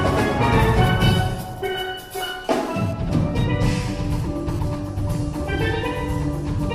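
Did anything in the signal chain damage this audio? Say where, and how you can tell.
Yes. GSM phone buzz entered in the analogue wiring from 2.45 to 4.59 s, at about 23 dB below the signal. A nearby 2G phone transferring data bursts 217 times a second, and the circuit rectifies those pulses into a raspy, harmonic-rich 217 Hz buzz that comes and goes. Mains hum would be a steady 50 or 60 Hz tone.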